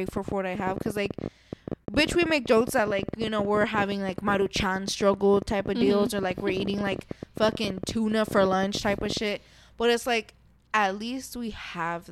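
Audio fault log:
0.09–9.18 s, train of clicks: rapid, uneven ticking at about 16 clicks per second, some 150 in all, standing well above the speech and audible in pauses too. The near-identical pulse shape points to a likely cause in nearby equipment interference or a faulty connection or power supply.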